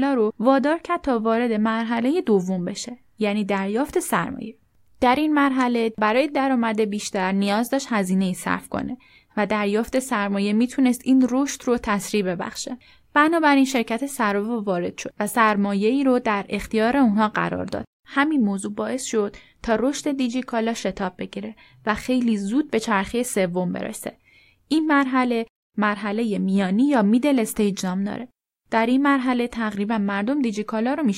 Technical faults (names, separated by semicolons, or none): none